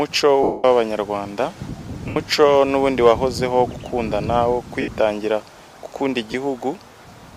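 Four dropouts from lost LE Audio frames show up: at 0.43 s for about 210 ms, at 2.08 s for 80 ms, at 4.81 s for 70 ms, and a short one at 6.32 s lasting 20 ms, which fits 10 ms frames. Each time, the decoder papers over the gap by repeating the last spectrum with scrambled signs, so tones smear into a hiss. In the long first gap, you can hear that smear fading away toward silence.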